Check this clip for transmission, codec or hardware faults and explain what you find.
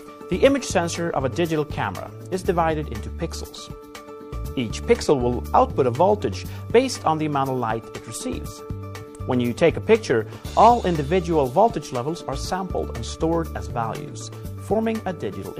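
Nothing here calls for attention, as no transmission, codec or hardware problems turn up anywhere in the audio.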